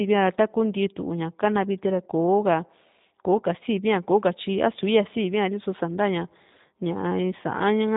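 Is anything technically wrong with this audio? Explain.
Yes. Throughout the speech, G.729 codec damage is plainly audible. Rebuilding each 10 ms frame from a vocal tract filter and sparse pulses leaves a rough, synthetic timbre, consistent with an 8 kbit/s stream. On a spectrogram, everything stops flat at 3.8 kHz.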